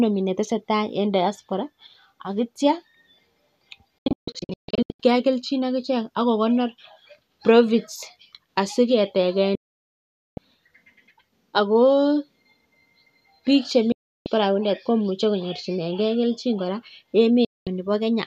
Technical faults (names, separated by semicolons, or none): digital broadcast dropout